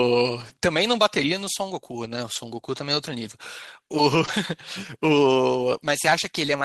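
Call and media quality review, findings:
Lost packet rebuilt from error correction at 2.35 s and 4.27 s: brief rough, noisier patch, no gap. One 20 ms packet lost each time. Opus decoder played the low-bitrate in-band FEC copy carried in the next packet instead of the original frame.

Short concealed packet loss, 4.25–4.29 s: short smear and wobble. 20 ms missing at the jitter buffer/decoder. Receiver extended the preceding sound, then crossfaded into the real audio, with the FEC-rebuilt frame closing the span. Call path is Opus, consistent with roughly 24 kbps and 12 kHz bandwidth.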